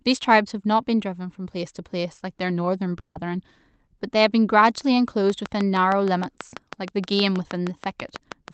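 A long network dropout runs from 2.99 to 3.17 s, likely from packets that never arrived. The speech is carried on as a fading buzz, then about 0.1 s of silence, and roughly 0.16 s of speech is simply lost when the audio resumes.

A train of clicks starts at 5.30 s and runs to the end of the clip: regular pops at about 6.3 per second, well louder than the speech, likely from electrical interference or a faulty connection or power supply, and audible as steady ticking through pauses too.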